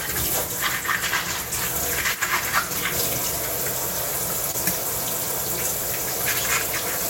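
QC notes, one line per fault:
2.15–2.22 s, one channel drops out: for about 70 ms the level dips abruptly by about 6 dB, then snaps back just as suddenly, so you get a quick notch in the sound. The likely cause is one side of the stereo pair going missing for that instant. Once everything is folded to mono, the material shared by both sides loses half its contribution, and anything that lived only on the missing side vanishes for the duration.
4.51–4.55 s, short concealed packet loss: about 20 ms of audio never arrived in time, and the receiver papered over it with roughly 21 ms of made-up continuation before crossfading back into the real signal. The patch extends whatever was playing just before, so instead of a clean gap you hear a tiny smear or wobble where that slice of real audio should be.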